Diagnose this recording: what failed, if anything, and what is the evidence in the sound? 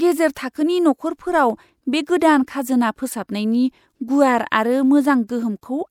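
The codec is where this went wrong: there's pre-echo at 2.46 s, right before "खाजोना फोसाबनायनि", and again at 5.28 s. A short hiss runs about 14 ms and 10 ms ahead of each attack, because block quantisation noise spills backwards and softens the onset.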